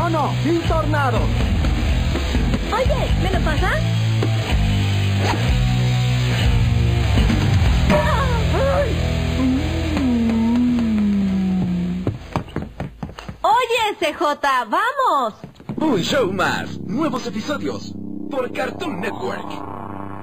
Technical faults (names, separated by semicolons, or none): channel delay (comb filtering)